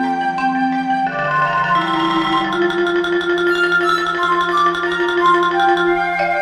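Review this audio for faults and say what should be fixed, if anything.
No faults turned up in this audio, so nothing needs to be fixed.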